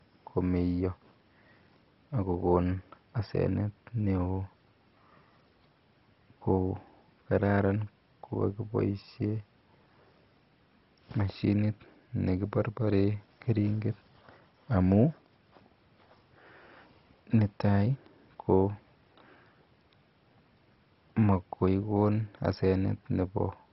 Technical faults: MP2 compression

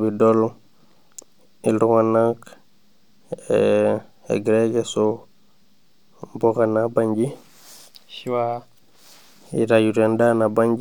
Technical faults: none

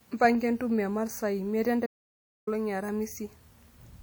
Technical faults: audio dropout to silence

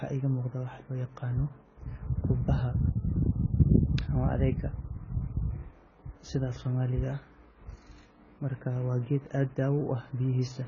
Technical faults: AAC compression

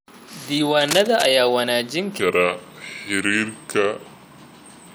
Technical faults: cable scratch noise; section at the wrong speed

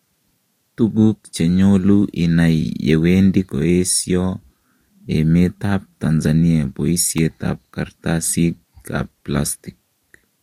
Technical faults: electrical switching spike

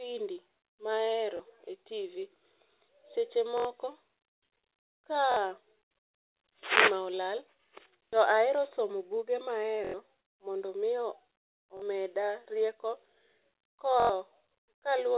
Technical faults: repeated buffer; short concealed packet loss

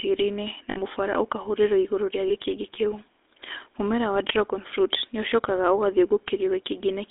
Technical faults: GSM full-rate codec; lost GSM frames

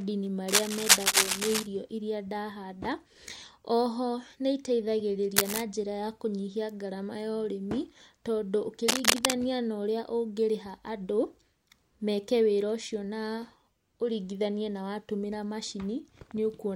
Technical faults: cable scratch noise

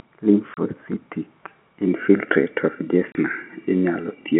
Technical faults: packet loss filled with silence

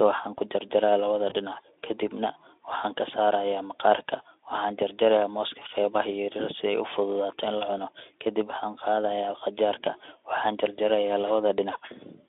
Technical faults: VoIP packet loss concealed by the speech codec

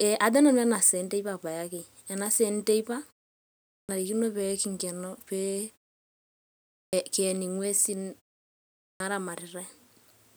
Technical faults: clipped start after a pause

